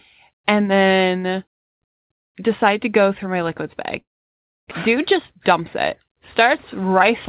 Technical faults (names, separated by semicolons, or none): long network dropout; jitter buffer speed-up